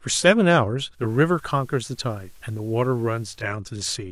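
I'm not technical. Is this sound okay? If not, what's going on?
No. From 0.91 to 3.52 seconds there is a digital radio blending to analogue. The radio briefly lost its clean digital signal and switched over to the older FM broadcast of the same station, then switched back. Each change-over is a quick fade of about 0.2 seconds. While on FM, the speech picks up a faint background hiss and drops very slightly in loudness, before the clearer digital sound returns.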